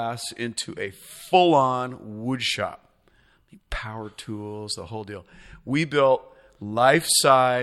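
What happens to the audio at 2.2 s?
Nothing goes wrong at 2.2 s; the speech carries on cleanly through that point with no dropout, click or distortion.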